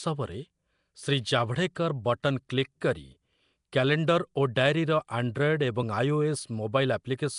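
From start to finish the speech carries a rough, hissy halo and a smeared, underwater feel, and nothing comes through above about 10.6 kHz. That's most likely Nellymoser compression, the old Flash microphone codec. It chops the audio into short blocks and spends a fixed, small bit budget on each, so quieter bands get no bits and are patched with noise. The damage is plainly audible here, and the overall character fits a rate around 44 kbps.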